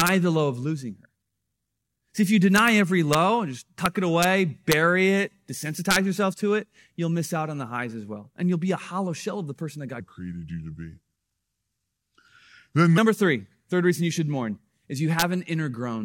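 Integer overflow cracks appear at 0.00–0.08 s, just before "the low of losing", then at 2.56–2.68 s, at 3.13 s just before "and just", and at 3.86, 4.23, 4.72 and 5.91–5.96 s. On these peaks the signal runs about 1 to 3 dB past the largest value the integer format can hold. Instead of being limited, each sample wraps to the opposite sign. The result is a violent, sharp crack, harsher than ordinary clipping. On the waveform, the tops of the peaks jump straight to the opposite rail. On a spectrogram, each event shows as a thin full-height broadband stripe.

From 10.0 to 12.98 s, between "of the person that" and "three third reason you", there is a section at the wrong speed. It plays at 0.789 times its recorded speed, so the speech becomes slower and drops roughly four semitones in pitch, sounding deep and drawn out. The likely cause is that this stretch was fitted to the wrong clock. A spectrogram shows the harmonic bands packed lower and the syllables stretched in time.

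One more integer overflow crack follows at 15.19–15.22 s, where the signal runs about 2 dB over. It shows the same sign-flipped spike on the waveform and the same broadband stripe on the spectrogram.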